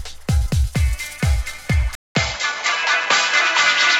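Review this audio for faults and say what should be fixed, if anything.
The recording input was likely switched to a poorer device at 1.95 s, and that device carries the sound through to the end. The switch leaves a gap of about 200 ms, after which nothing above 7.6 kHz remains, so the audio turns duller and boxier. The level stays much the same, but a different, faint background noise appears, roughly 35 dB under the signal. Locking the input to one fixed device for the whole recording, with automatic device switching turned off, would prevent this.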